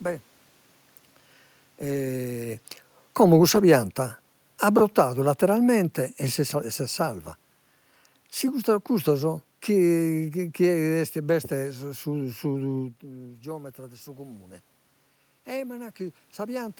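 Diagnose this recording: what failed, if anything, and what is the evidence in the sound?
The automatic gain falling fault sits in the call processing stage. Around 2.5 s the talker moves. From 3.15 s to 6.02 s the gain control responds by easing its gain down by about 5 dB, and the room noise sinks with the speech. On a waveform the envelope, noise floor included, tapers over those three seconds. On a spectrogram the background darkens along with the speech, which rules out a change in the talker's own level.

The automatic gain rising fault is in the same stage. Near 13.0 s the talker moves away, and the input drops by about 13 dB. Between 13.01 s and 14.68 s the gain control lifts its gain by about 4 dB, so speech and room noise swell together over about a second and a half. The waveform shows a step down followed by a slow upward ramp. On a spectrogram the background brightens along with the speech.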